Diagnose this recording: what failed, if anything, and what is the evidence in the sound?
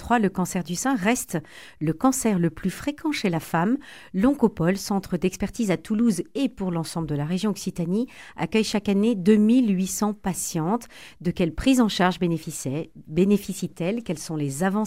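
The failure is at the disc read, CD scratch ticks. Between 5.05 and 5.99 s there are five short clicks, each under a couple of milliseconds, about five a second. That's a blemish passing the laser once per revolution, corrupting more than error correction can rebuild, so the player patches or mutes those samples.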